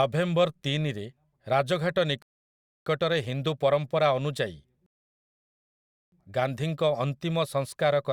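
A speech recording with two rebuffering stalls: the player starved for data and went silent at 2.22 to 2.86 s, picking up cleanly with "ହିନ୍ଦୁ ପରମ୍ପରା", then again from 4.86 to 6.12 s. Nothing's skipped, just about 0.64 s and 1.26 s of dead air added.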